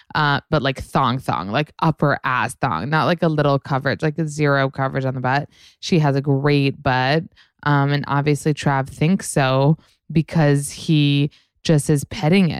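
No technical faults can be heard anywhere in the speech recording, and the signal stays steady and intact throughout.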